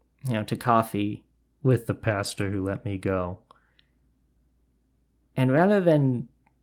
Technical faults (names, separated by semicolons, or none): lost packet rebuilt from error correction; drift correction step